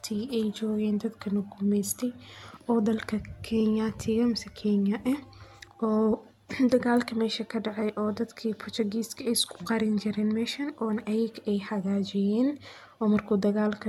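From start to finish the speech sounds swirly and hollow, consonant attacks are smeared, and nothing reaches above 17 kHz. This points to generation loss, likely from repeated AAC-LC encoding, around four passes at what fits 96 kbit/s, each adding fresh quantisation noise.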